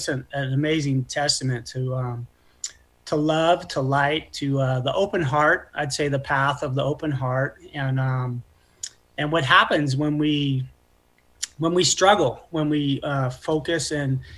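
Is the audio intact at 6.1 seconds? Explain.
Yes, the audio at 6.1 seconds is intact, with no dropout, click, distortion or other fault at that moment.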